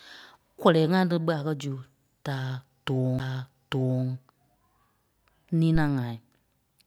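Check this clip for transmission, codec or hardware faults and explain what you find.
Two hardware faults are audible in this speech.

At 3.19 s, right after "zu da", there is a CD skip. The laser jumped to another turn of the disc's spiral. The player muted for roughly 10 ms, which sounds like a tick. Then the audio resumed from a different point on the disc.

From 5.75 to 5.94 s there is a phantom power thump. Supply voltage was switched on a live input. The step passed through the coupling capacitors. It sounds like a deep thump that dies away over about 41 ms.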